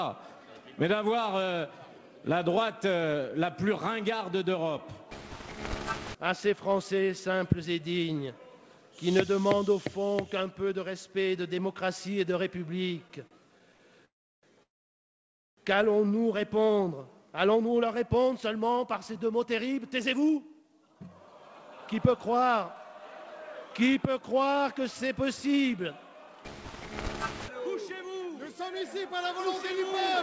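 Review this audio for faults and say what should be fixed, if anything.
The first problem is repeated stalls, a stutter, between 13.08 and 13.81 s. There are four short hiccups in that stretch, adding up to about 110 ms of filled-in sound, and the longest is 52 ms. Packets were arriving late, so the jitter buffer kept running dry, and each time the receiver stretched the last bit of sound until more came in. Nothing is lost, but the audio drags and stumbles there. A slightly deeper jitter buffer target would absorb late arrivals like these.

Right after that come two call audio freezes. The first runs from 14.05 to 14.45 s. There's a brief carry-over of the last sound, then about 0.34 s of silence. The second runs from 14.63 to 15.59 s and is nearly a full second of dead air, about 0.92 s of it silent. The likely cause is packets held up somewhere on the network, leaving the buffer empty until they showed up. 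The audio then carries on exactly where it stopped, so a gap is inserted rather than anything dropped. Cleaning up the network path, or prioritising this traffic with QoS, should prevent stalls this long.

After the freezes, the receiver works off the backlog with jitter buffer speed-ups. From 17.19 to 21.00 s it plays at about 108% speed and trims roughly 0.3 s, which is enough to sound a bit hurried. It's gentler from 23.84 to 25.78 s at 105% and from 27.60 to 30.14 s at 104%, trimming about a tenth of a second each time. It does this by cutting out tiny pitch-period-sized slices, so the pitch holds while the timing tightens. Avoiding those delay spikes in the first place would remove the need for this catch-up. Capping how fast the buffer shrinks would also make the catch-up less noticeable.

Nothing is heard above 8 kHz throughout, which fits a G.722 call path at around 64 kbps.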